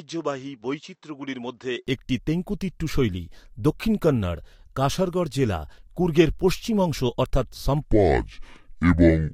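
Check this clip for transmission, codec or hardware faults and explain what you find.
Two faults are audible in this speech recording. One affects the opening, and another affects the closing stretch.

From 0 to 1.87 s, the sound is dull and narrower. It sits about 10 dB lower, over a different noise floor around 55 dB down. It then clears with no gap. The likely cause is the input switched to a poorer device.

From 7.84 s to the end, the section is at the wrong speed. It plays at 0.614 times normal speed, so pitch drops together with tempo, roughly ten semitones. The voice turns deep and dragging. The likely cause is playback on a mismatched clock.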